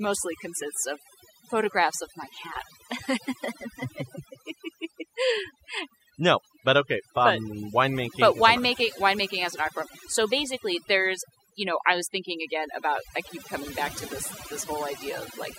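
Overdone noise removal runs through the whole clip. A noise reducer set too hard shuts individual frequency bands down whenever they sit near its noise estimate, so the pauses fall to near silence flecked with twinkling specks, and quieter parts of the speech vanish.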